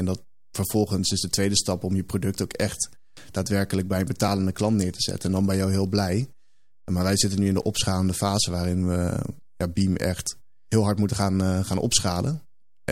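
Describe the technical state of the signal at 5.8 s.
At 5.8 s the speech signal is intact, with no audible dropout, clipping, distortion or other fault.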